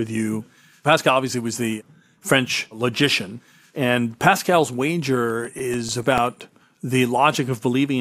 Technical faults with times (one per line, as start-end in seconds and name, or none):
5.30-7.06 CD scratch ticks